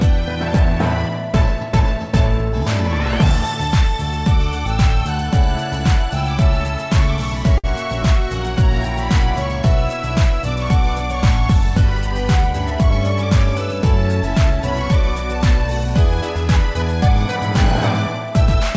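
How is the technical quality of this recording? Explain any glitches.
Two brief timing glitches stand out, heard through a call codec whose band stops at 8 kHz, which fits G.722 at about 64 kbps.

At 7.58 to 7.66 s there is a short stall from a late packet. A packet arrived late, the jitter buffer ran dry, and the receiver stretched the last sound for about 58 ms before resuming exactly where it stopped. A sound is held too long with a slight buzz or dip, but nothing is skipped. That sets it apart from a lost packet, where a gap is concealed and content goes missing.

From 12.53 to 12.91 s there is a jitter buffer speed-up. The buffer had grown beyond its target, so the receiver trimmed pitch-period-sized slices repeatedly, removing roughly 40 ms. Playback runs at about 108 percent speed and sounds briefly hurried. Unlike a resampling error, the pitch stays unchanged.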